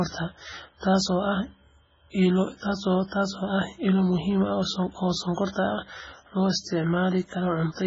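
From start to finish the speech sounds watery and swirly, with nothing above about 7.5 kHz, so the top end is simply gone. That's likely MP3 compression at a very starved setting, something that fits a bitrate around 16 kbps. With so few bits, the encoder chops the treble at a fixed point and drops weaker frequency lines that flicker on and off between frames, which is exactly that heavy, bubbling smear you hear throughout.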